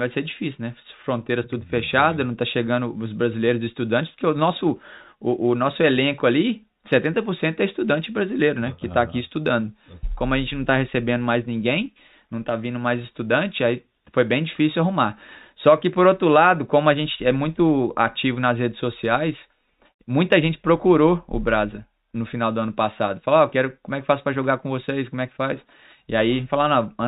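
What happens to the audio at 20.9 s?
Nothing goes wrong at 20.9 s: the speech carries on intact through that moment, with no dropout, click or distortion.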